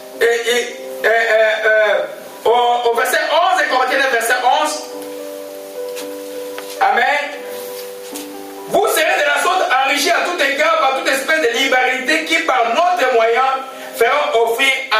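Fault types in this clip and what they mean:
gain pumping: throughout, the gain swings around 15 dB, pulling loud and soft parts closer in level and squashing the sound, likely from excessive gain driving a fast limiter.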